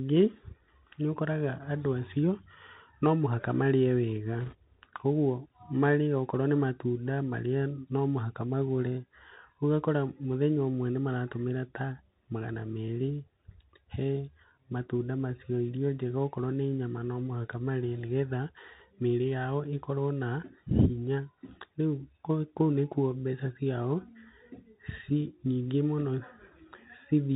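Bluetooth CVSD headset codec, throughout the speech: each sample is coded as a single up-or-down bit with an adapting step, so nothing above 4 kHz survives, sibilants turn scratchy, loud high sounds outrun the step and distort, and a granular hiss sits underneath.

Bit errors on a Bluetooth voice link, from 4.41 to 4.55 s: flipped bits, at a rate of around 2 percent, corrupt the headset stream briefly. Because each bit carries only a small step and errors fade quickly, this comes through as a short rushing crackle rather than sharp clicks.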